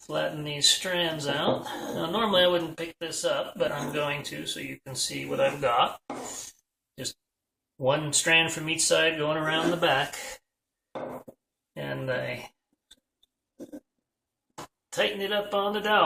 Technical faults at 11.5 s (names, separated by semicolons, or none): none